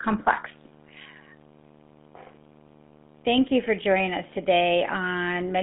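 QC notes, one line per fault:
Throughout, video or display buzz: a screen or video cable is coupling its field-rate signal into the audio path, so a steady 75 Hz buzz with a layer of hash above it runs under the speech. It sits roughly 25 dB below the speech, and the interference never stops when the talking does.
Throughout, GSM full-rate codec: the speech has passed through the original GSM full-rate coder, which fits a 13 kbps channel. That coder rebuilds the voice from a vocal-tract model excited by evenly spaced pulses, carrying only a thinned-out excitation, so the damage is plainly audible as a buzzy, gravelly roughness. The band runs from about 150 Hz to 3.5 kHz, with nothing above 3.8 kHz, which leaves the sound narrow and dull.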